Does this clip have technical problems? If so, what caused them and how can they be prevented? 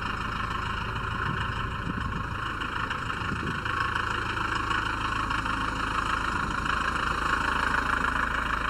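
Yes. Channel delay (comb filtering) is present throughout the clip: the sound is hollow and phasey, with fixed notches in the spectrum. One channel arrives late by a fraction of a millisecond, roughly 0.7 ms, and when the two are summed to mono the shared content cancels at evenly spaced frequencies, the first notch falling near 700 Hz and the rest at odd multiples above it. Prevention: time-align the channels, or correct the offset, before any mono fold-down.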